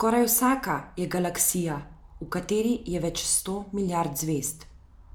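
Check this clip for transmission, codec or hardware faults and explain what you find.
No faults found in the speech.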